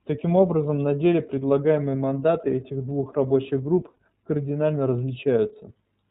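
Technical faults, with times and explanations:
Throughout, iLBC codec: the speech is band-limited to narrowband, with nothing above 4 kHz, and it has a plainly audible rough, slightly synthetic edge. That comes from each 30 ms frame being coded on its own, at a rate that fits 13.33 kbps.
3.93 to 3.96 s, lost iLBC frames: one 30 ms frame drops out. The decoder covers it by repeating the last pitch cycle with some noise mixed in, so you hear a brief held, faintly buzzy vowel. The voice snaps back right after because the next frame doesn't depend on the lost one.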